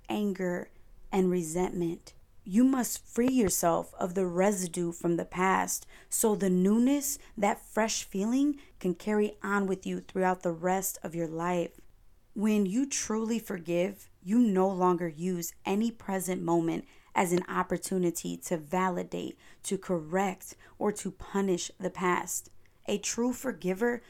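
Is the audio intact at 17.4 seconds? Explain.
No. A single loud pop lands from 17.38 to 17.40 s, between "any present moment as" and "opportunity to validate to", likely a brief voltage pulse entering the signal. It sounds like a sharp click over the ongoing speech, peaking roughly 15 dB above it, and shows as a lone spike on the waveform and a thin full-height stripe on a spectrogram.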